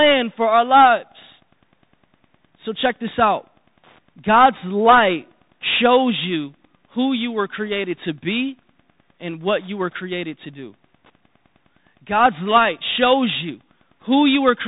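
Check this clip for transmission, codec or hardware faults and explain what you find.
Two faults run through the whole clip: Wi-Fi interference and the Bluetooth CVSD headset codec.

The Wi-Fi interference is a steady tick repeating every 102.4 ms, about ten times a second. It sits faint, well below the speech. A nearby Wi-Fi radio's beacon bursts are being rectified by the audio circuit and leak in as clicks.

The Bluetooth CVSD headset codec is plainly audible. Nothing above 3.8 kHz gets through, so the speech sounds narrow and muffled. The coder sends one bit per sample, stepping up or down, which fits a 64 kbps link. Fast, loud high sounds outrun its adaptive step and distort, s sounds turn scratchy, and a granular hiss lies under the speech.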